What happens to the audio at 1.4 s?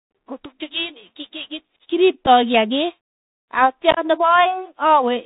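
At 1.4 s the speech sounds narrow and muffled, with scratchy s sounds, strained loud high passages and a granular hiss underneath, as it does throughout. That is the Bluetooth CVSD headset codec: one up-or-down bit per sample with an adapting step, nothing above 4 kHz.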